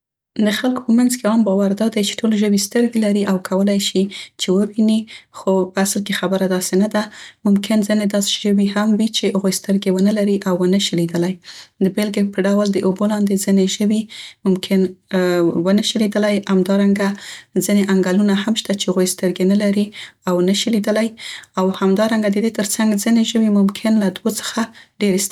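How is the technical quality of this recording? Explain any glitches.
No technical glitches can be heard in this speech recording. The audio holds steady throughout, with nothing that calls for an explanation.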